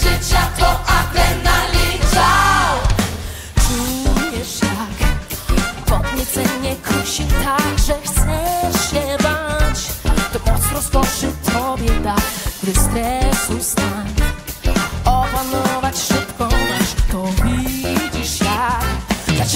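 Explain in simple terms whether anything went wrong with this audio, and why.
Nothing went wrong here that a listener would notice; the sound comes across steady and unbroken all the way, with no glitches, dropouts or odd noises to point to.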